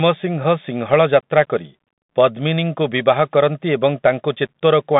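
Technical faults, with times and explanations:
Throughout, Bluetooth CVSD headset codec: speech is held to 150 Hz–3.7 kHz. One-bit up/down steps lag fast peaks, so sibilants turn scratchy over granular hiss.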